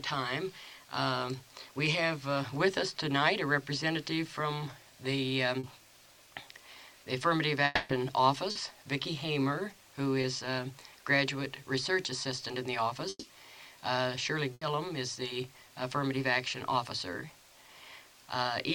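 At 5.59 s, 8.51 s and 10.21 s, short concealed packet loss fills gaps of 40, 40 and 20 ms with an extension of the preceding sound. Each is heard as a brief smear or wobble. On a spectrogram it shows as a thin stretch of repeated, slightly blurred harmonics.

From 7.65 to 7.91 s the audio turns into a fading buzz or hiss for about a quarter of a second and then resumes further along, with no true silence. This is likely a long network dropout. A waveform shows a decaying, repetitive envelope, and a spectrogram shows smeared, smoothed bands.

Bursts of packet loss follow at 13.09 to 13.25 s and 14.53 to 14.63 s. The first is 140 ms of held, dimming sound ending in about 30 ms of silence. The second is 80 ms of fading fill. Both look like tapering, flattened spectral blocks before the signal jumps back in.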